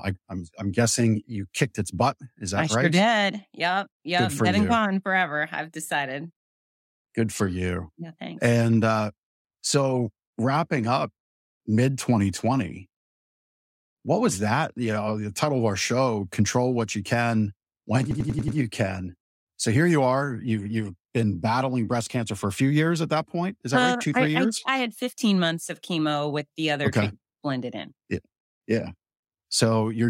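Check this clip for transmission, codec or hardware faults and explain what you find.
One hardware fault appears: a system hang loop from 18.11 to 18.58 s, just after "what you can when". The system froze while the sound hardware kept replaying its ring buffer, so a 92.88 ms piece, which fits a 4096-sample buffer, repeats five times at 10.8 Hz as a machine-gun stutter.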